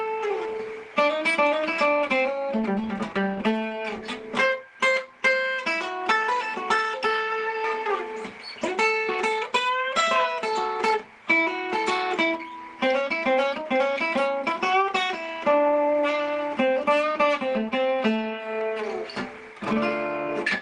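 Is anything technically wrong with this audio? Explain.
No, nothing here sounds technically wrong; the audio comes across steady and intact the whole way, with nothing that calls for a fix.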